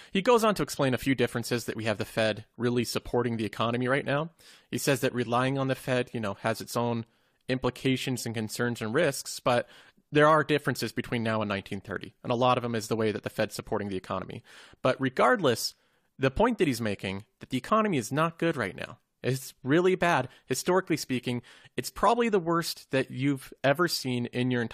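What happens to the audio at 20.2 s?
Nothing goes wrong at 20.2 s; the speech carries on intact through that moment, with no dropout, click or distortion.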